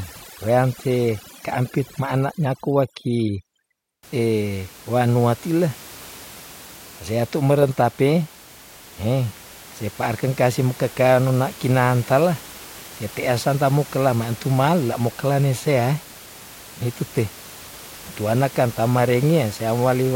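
From the start to about 4.03 s, the background drops and breaks up into twinkling specks. This is overdone noise removal: bands near the noise estimate, about 20 dB below speech, were cut hard, taking quiet speech detail with them.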